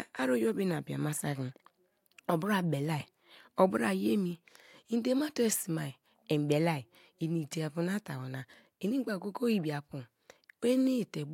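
From about 0.10 s right through to 11.31 s, the speech carries clock slip clicks: a soft, steady rattle of tiny ticks roughly every 50 ms, a couple of hundred in all. Likely two unsynced clocks drifting around 400 ppm apart, slipping a sample each time.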